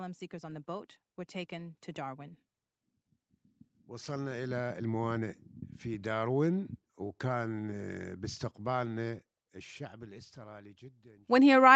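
Automatic gain rising occurs three times in this speech clip: from 0.29 to 2.38 s by about 3 dB, from 3.89 to 8.04 s by about 9 dB, and from 8.58 s to the end. Each time the gain control judges the input too quiet and slowly turns itself up, so the voice and background swell together, with the top end stopping near 8 kHz as the call codec passes it.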